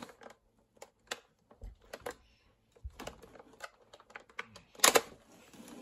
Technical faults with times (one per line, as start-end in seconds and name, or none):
none